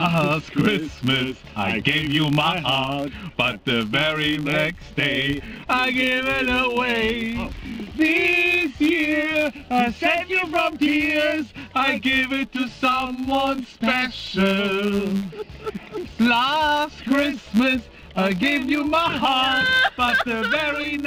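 Filter restarted on every block, throughout the audio: the filter starts each block from silence, so a small transient at each boundary forms a steady 100 Hz buzz that tracks the signal's level.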